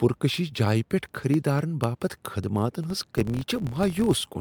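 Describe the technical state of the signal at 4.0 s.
At 4.0 s the sound is swirly, smeared and hollow, with softened attacks. This is generation loss across the whole clip, most likely from repeated MP3 re-encoding, around seven passes at about 150 kbit/s. Each pass requantises on a shifted frame grid, so noise and spectral holes accumulate.

Regular ticks also fall every 0.25 s from 0.09 s to 4.34 s. These are periodic USB or driver dropouts: a blocking task at a fixed interval loses roughly a millisecond of audio each time and fills it with silence.

From 2.90 s to 4.21 s, which includes 4.0 s, a 43.1 Hz buzz rises and falls with the signal level. This comes from a filter restarted on every block. It resets its state at each block boundary, which fits 1024-sample blocks, so every block opens with a small transient.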